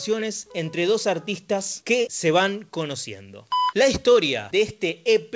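Nothing goes wrong anywhere in the clip; the sound has simply come through a call connection, with everything above about 8 kHz missing in the way a G.722 wideband link at 64 kbps would leave it.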